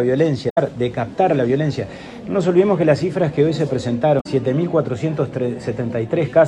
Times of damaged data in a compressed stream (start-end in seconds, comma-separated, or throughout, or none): 0.48-0.58, 4.17-4.26